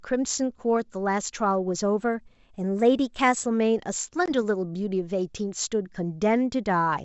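A speech recording carried over what sounds like G.722 wideband telephone coding, with clear speech up to about 7 kHz. From 2.00 to 3.45 s the speech runs about 5.7% fast and roughly a semitone (95 cents) sharp, likely a drift correction step from clock-matching software adjusting its buffer. At 4.26 to 4.31 s a hard-edged 20 ms gap, about one packet's worth, marks packet loss on an ADPCM call, with the decoder's predictor briefly out of step afterward.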